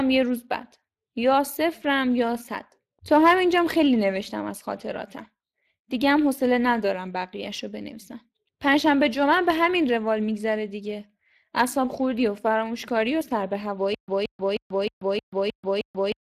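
A speech recording carries Speex codec damage throughout. The coding artefacts are plainly audible as a rough, noisy texture, consistent with a CELP coder starved of bits for the excitation at a rate around 22 kbps, and there is no content above 15.4 kHz. From 13.95 s to the end there is a stutter with silent gaps. A 0.17 s fragment repeats seven times, each followed by about 0.14 s of digital silence, on an even 0.31 s cycle. The likely cause is a stalled stream replaying its last buffer on each retry, so the audio that should have played there is lost.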